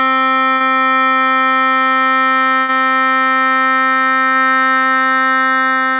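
At 0.54 s the music breaks up in a burst of packet loss. Several packets went missing in a row. The receiver held the last sound for about 60 ms and let it fade. Playback then jumps ahead, skipping about 60 ms of music.

From 1.97 s a loudspeaker feedback squeal begins. A microphone is picking up its own loudspeaker. At 4.4 kHz the loop gain passes one, so that tone feeds itself. It swells over about two seconds into a thin, piercing whine, ending up a few decibels louder than the music.

At 2.60 s, while the squeal is still sounding, a second burst of packet loss hits. This time the concealment stretches the last sound for about 84 ms as it fades. Playback resumes with about 80 ms of audio gone. It lasts until 2.70 s.

The squeal stops at 4.39 s.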